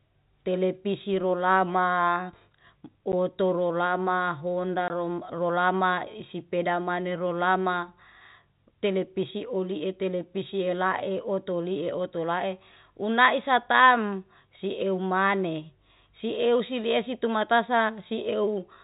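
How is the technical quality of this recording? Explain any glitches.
The speech carries two brief dropouts where the sound cuts to dead silence, over a telephone-band G.711 line that limits everything to below 4 kHz.

At 3.12 s and again from 4.88 to 4.90 s, this is packet loss filled with silence. Audio went missing in transit and the receiver played nothing in its place. The 10 ms gap fits one packet of that length, and the 20 ms gap fits two. Each cut has hard edges.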